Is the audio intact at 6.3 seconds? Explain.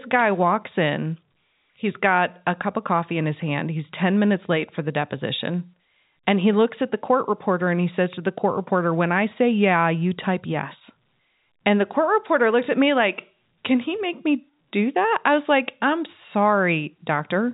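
Yes, the audio is intact at 6.3 seconds, with no fault at that moment beyond the ordinary telephone-band sound of G.711 coding, which passes nothing above 4 kHz.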